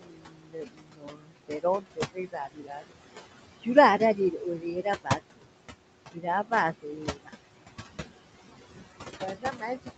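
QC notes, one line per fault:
Throughout: noise suppressor artifacts. The background noise, which sits only about 8 dB below the speech, is pulled down by about 19 dB wherever the suppressor judges a band to be steady noise, frame by frame. The noise drops away between phrases and returns underneath them. Nothing is audible above 8 kHz, which fits a wideband call codec such as Opus at a modest bitrate.
0.00–2.96 s, 3.98–5.47 s, 6.13–6.26 s, 6.78–7.40 s, 9.06 s to the end: speech cut by the noise suppressor. In these spans the suppressor treats parts of the speech as noise and turns them down with the background. The deepest drops are about 22 dB in the first two spans, about 17 dB and about 21 dB in the middle two, and about 18 dB in the last. The opening span loses roughly two seconds of speech in total. Soft consonants and word endings sound swallowed or faint.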